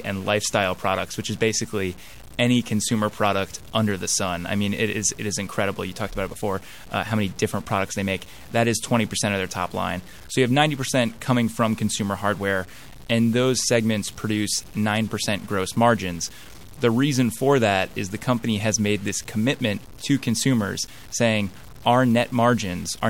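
Speech runs with a grainy, signal-following distortion from start to finish, with the error sitting only around 25 dB below the signal, which fits about 7 bits. The likely cause is low bit depth without dither, with samples truncated rather than rounded. Unlike a dithered low-bit signal, which would carry a steady hiss, this grit rises and falls with the speech itself, roughening quiet passages and sputtering or vanishing at the softest levels.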